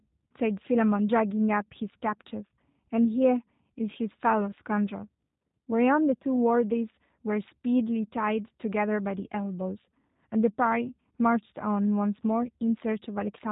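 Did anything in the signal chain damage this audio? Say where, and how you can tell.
Yes. The damage sits at the codec stage, and it runs through the whole clip. This is G.729 codec damage, and it is plainly audible. Nothing above 4 kHz survives, so the speech sounds dull and boxed in. Voicing has a rough, slightly synthetic buzz. That fits an 8 kbit/s G.729 stream. The codec does not store the waveform. It rebuilds each 10 ms frame from a vocal tract filter, a pitch predictor and a few pulses.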